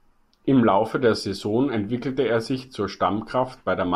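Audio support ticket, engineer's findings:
Checked the whole speech clip and found nothing wrong; no fault to chase here.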